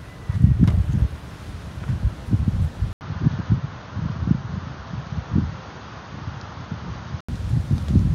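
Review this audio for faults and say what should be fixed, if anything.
At 2.93 s there's an 80 ms gap, then the sound goes duller and a few dB quieter, cut off above 6.7 kHz, with new background noise around 30 dB down, until 7.29 s. That's most likely the input switched to a poorer device, then back. Lock the recording input to one device so the system can't hand off mid-take.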